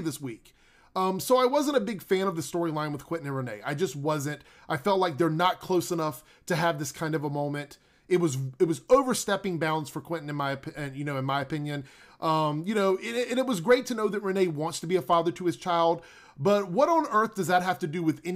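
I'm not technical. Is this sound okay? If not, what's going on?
Yes, no faults are audible.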